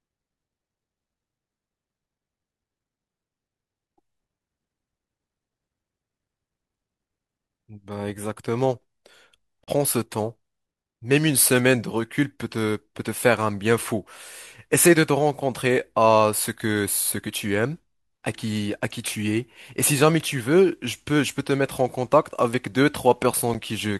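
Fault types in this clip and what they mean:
Bluetooth stall: likely radio interference delayed packets until the headphone buffer emptied, pausing playback until resent data arrived. The speech cuts to silence for about 38 ms at 9.64 s and 10 ms at 23.54 s, then resumes.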